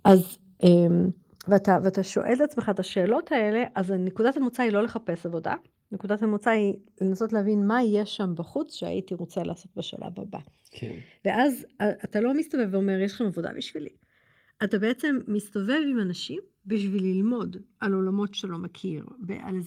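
From the opening moments the speech has a slow, sweeping flanging, the sign of channels drifting apart. The two sides run on clocks that disagree by something like 70 parts per million, so their offset creeps toward roughly a millisecond and the summed comb notches glide steadily. This differs from fixed comb filtering because the notches keep moving.

Between 0.08 and 0.14 s the loudest syllable takes on a harsh, crackly edge, about 4 dB past the converter's limit with a sizeable share of its peaks flattened. That is most likely microphone overload. It is a brief distortion burst, not a steady buzz.

At 0.12 s the level abruptly sinks by 2 dB, then by 3 dB at 1.11 s and 2 dB at 2.22 s, with speech and background falling together. This points to the microphone volume being stepped down, unlike a gate, which would cut only the background.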